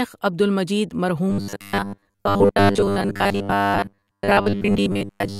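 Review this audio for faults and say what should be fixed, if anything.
From 1.30 s to the end at 5.39 s, right after "عبد المجید", the speech becomes a rigid, metallic buzz at 100 Hz. This is robotic sound from repeated short buffers. Audio likely arrived too seldom, so a 10 ms chunk was replayed for most of that stretch. A larger buffer or a steadier input stream would prevent it.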